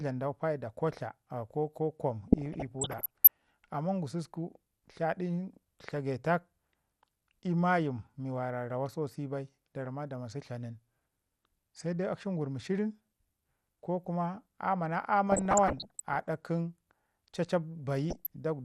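Throughout the clip the speech sounds dull, with a gurgling, granular edge. This is likely MP2 compression at a low rate, which fits around 80 kbps. Starved of bits, the encoder switches upper sub-bands off, so they flicker and the remaining bands are coarsely quantised. A spectrogram shows a missing, patchy top end broken into flat horizontal blocks.

From 2.28 to 3.28 s, from 15.27 to 16.26 s, and briefly from 18.10 to 18.27 s, DAB burbling disturbs the speech. Bit errors slipped past error correction and corrupted samples, putting short blips of noise into single sub-bands. On a spectrogram these show as scattered bright band-shaped blotches.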